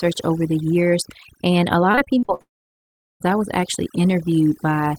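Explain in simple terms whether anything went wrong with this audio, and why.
Three problems can be heard, one across the whole clip and two close together in the middle.

Overdone noise removal runs from start to finish. A noise reduction tool was set too strong, so it switched off narrow bands of sound whenever they were close to the background hiss, and the quieter parts of the speech were cut along with it. The background drops and breaks up into small twinkling specks.

Repeated packet loss (robotic sound) starts at 1.91 s and lasts until 2.41 s. In that half second, about seven short pieces of audio fail to arrive, the longest about 46 ms. Each hole is patched by stretching the last bit of sound, but about two fifths of the stretch is patched this way, with about 0.2 s missing in total. The result is choppy and robotic, with pieces of the speech gone.

A long network dropout follows immediately, from 2.41 s to 3.22 s, most likely because the connection stopped delivering audio altogether. 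About 0.8 s of speech is lost. A brief fading buzz carries over the first moment, and then about three quarters of a second of silence follows. The speech resumes at 3.22 s, but whatever was said during the gap never comes back.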